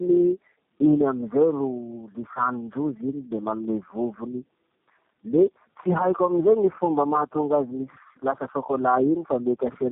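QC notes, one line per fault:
Throughout, tandem speech coding: the speech is rough, muffled and warbly because each low-rate coder re-encodes the previous one's already degraded output, which fits three such codecs in a row. A spectrogram shows nothing above 3.8 kHz and smeared, blotchy formant bands.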